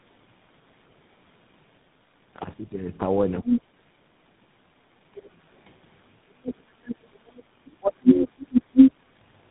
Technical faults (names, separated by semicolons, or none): tandem speech coding; speech suppressed in double talk; other side's voice leaking through; background gated by the echo canceller